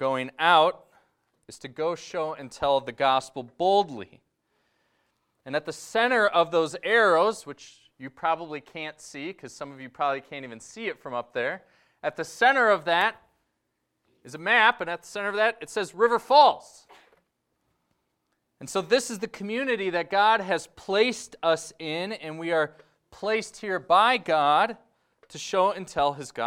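Nothing stood out as a technical fault anywhere in the audio on listening.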